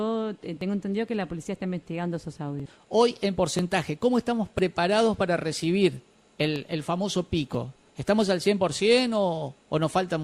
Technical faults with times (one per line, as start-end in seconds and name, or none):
0.61 overlap between stream segments
2.60 overlap between stream segments
3.59 overlap between stream segments
4.59 overlap between stream segments
6.56 overlap between stream segments
7.55 overlap between stream segments